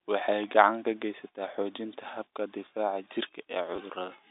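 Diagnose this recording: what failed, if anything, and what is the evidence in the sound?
Loud pop, 0.32 to 0.46 s: two sharp pops a few dB above the speech, which continues underneath, likely a voltage step from a plug, switch or static in the analogue wiring.

Packet loss with last packet repeated, 3.76 to 3.78 s: a 20 ms robotic stutter where the network dropped audio and the receiver replayed earlier sound, which fits two 10 ms packets.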